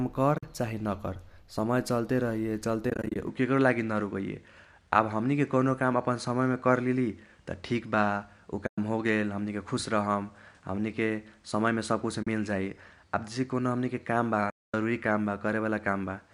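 Right at the start, around 0.35 to 0.43 s, there's AAC frame loss with muting: about 60 ms of audio drops out, mostly as a single run. The decoder zeroes the missing frames, so you get soft-faded holes. The gaps fit short frames of about 10 ms, consistent with the low-delay AAC the stream is likely carried on. The same thing happens again from 2.90 to 3.16 s, with about 140 ms lost in short bursts.

At 3.27 s the input switches to a poorer device, likely a different mic or a headset profile. There's no gap and no level jump, but everything above 10.5 kHz vanishes, so the sound goes duller. A new noise floor sits about 45 dB down.

More muted dropouts follow at 8.67–8.78 s (about 110 ms), 12.23–12.27 s (about 40 ms) and 14.50–14.74 s (about 240 ms, the longest hole).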